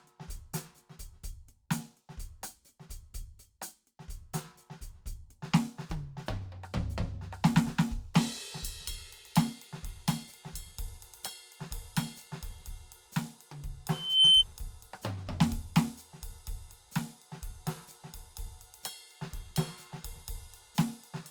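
At 13.91 s a thin, piercing tone at 3.1 kHz rises out of the music, swelling over roughly a third of a second to a shrill squeal about 15 dB louder than the music before it cuts off at 14.44 s. This is loudspeaker feedback squeal: a microphone picked up the speaker it was feeding, and at 3.1 kHz the loop's gain passed unity, so that frequency kept reinforcing itself.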